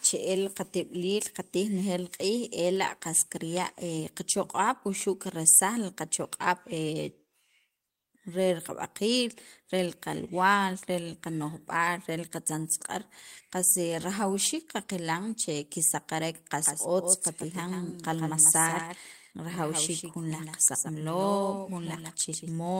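At 10.27 s there is a lost packet rebuilt from error correction. For about 20 ms the speech turns grainy and noisier, which points to a single lost packet whose content the decoder recovered from the low-bitrate copy carried in the following packet. Unlike ordinary packet-loss concealment, there is no silence, no smeared or repeated fragment, and no fade. The sound simply coarsens for one frame and then returns to full quality.

From 16.66 s to 22.52 s there is a doubled audio track. A second copy of the speech runs about 150 ms behind the original and sits roughly 5 dB below it. It is most likely the same signal captured again through a slower path. What separates it from acoustic echo or reverb is that the copy is a single repeat with no decay tail, no room colouring and full bandwidth, and it cuts in and out abruptly at those two points.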